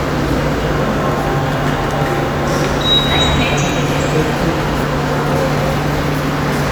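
At 3.35 to 3.40 s, damaged data in a compressed stream corrupts the audio: the decoder misreads frames and loses sync, producing a 50 ms blip. A spectrogram shows a brief broadband smear breaking the surrounding pattern; the waveform shows a short, abrupt discontinuity.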